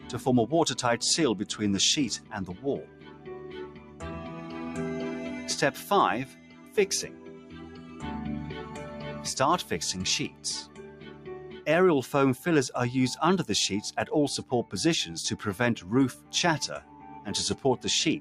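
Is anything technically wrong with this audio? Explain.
Yes. A noise suppressor meant for speech, applied to music or sounds, was left running across the whole clip. It treats sustained tones, ambience and decays as noise to be removed, so the level keeps swinging by something like 10 dB. Onsets punch through fine, but anything held or fading gets pulled down behind them, which gives the clip a pumping, fluttery, thinned-out feel from start to finish.

The sound is also cut hard by the noise suppressor in specific places: 2.84–4.02 s, 6.26–6.77 s, 7.08–8.03 s, 10.29–10.44 s, 10.65–11.66 s, 16.16–16.33 s and 16.81–17.1 s. In these spots the suppressor judged the material steady enough to be noise and clamped down by about 7 to 8 dB. You hear the sustain sag or the tail get chopped short, while any sharp hit in there stays mostly intact.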